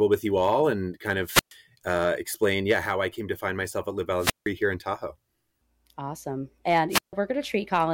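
At 1.23 s, after "you all and kind", a wireless microphone squelch dropout: the FM signal fades, hiss rises, and the receiver's squelch mutes for about 123 ms before "uh explain yeah how". It recurs at 4.17 s (164 ms mute, before "here in") and 6.89 s (150 ms).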